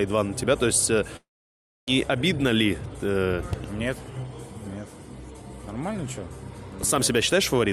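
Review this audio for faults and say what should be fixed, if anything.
From 1.16 s to 1.88 s the sound breaks off. A brief buzz or hiss continuing the last sound fades within about 80 milliseconds, and about 0.63 s of near-silence follows. The audio then resumes at 1.88 s with roughly 0.71 s of material simply gone, not delayed. This is likely a long network dropout: the receiver got no packets for that stretch, stretched out what it last had, then gave up and went quiet until the stream returned. To prevent it, send over a more stable link and use redundancy or forward error correction so gaps this long can be recovered.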